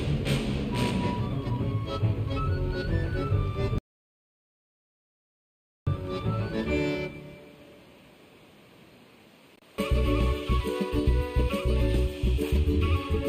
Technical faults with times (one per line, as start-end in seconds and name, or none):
3.78-5.87 audio dropout to silence